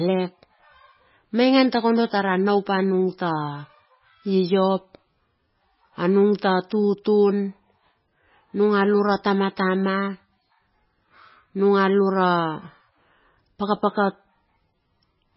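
An MP3 encoder starved of bits is the likely cause, pointing to a very low bitrate near 16 kbps: from start to finish the speech has nothing above 5.5 kHz, sounds dull and watery, with swirling, metallic chirps on s sounds and smeared consonant attacks.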